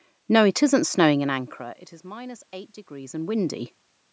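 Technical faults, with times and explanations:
0.71 to 3.68 s, automatic gain rising: after the input level falls by about 21 dB, around the moment the talker draws back from the microphone near 1 s, the gain control slowly lifts its gain by about 4 dB over roughly three seconds. Unlike a talker simply moving, this rise brings the room noise up together with the voice, so the background swells gradually instead of staying at a fixed level.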